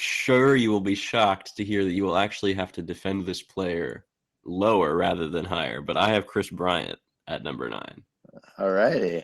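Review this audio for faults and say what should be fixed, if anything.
Nothing in this speech needs fixing. The audio has come through a WebRTC call path with its highs stopping near 12 kHz, which fits an Opus codec in super-wideband mode at a moderate bitrate.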